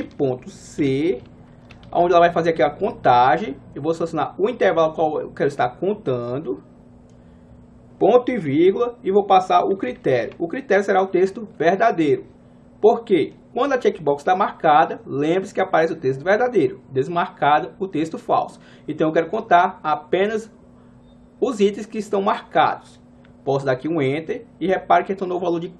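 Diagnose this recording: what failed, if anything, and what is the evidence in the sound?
Nothing failed: the sound gives no evidence of a fault at any stage.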